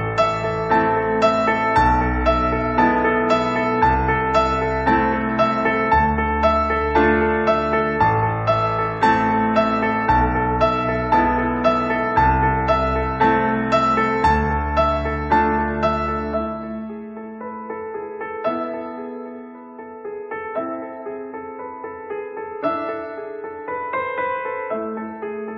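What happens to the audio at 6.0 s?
Nothing goes wrong at 6.0 s; the audio plays through that moment intact, with no dropout, click or distortion.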